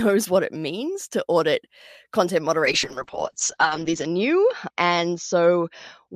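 Right after "means to audit content", at 2.67 s, there's a call bitrate drop: the speech goes muffled and rough to the end, consistent with roughly 48 to 8 kbps, top cut near 8 kHz.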